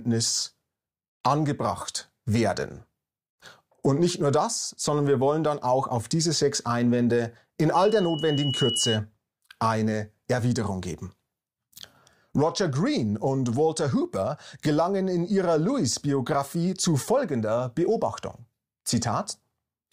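A microphone caught its own loudspeaker, causing loudspeaker feedback squeal from 7.74 to 9.00 s: a 2.9 kHz tone swells over about a second until it matches the sound.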